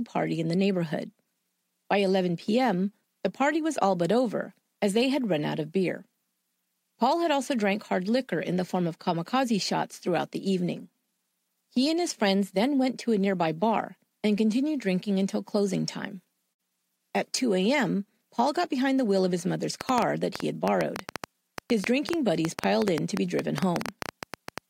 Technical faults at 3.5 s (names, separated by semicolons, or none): none